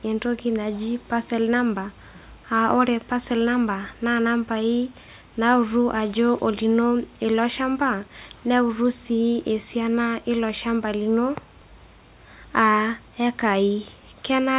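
A recording of speech, the signal carries no audible technical faults at any point.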